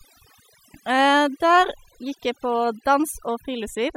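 Overdone noise removal runs throughout this speech clip: an over-aggressive noise reducer gates bands near its noise estimate, leaving near-silent, twinkling gaps and taking quiet parts of the voice with them.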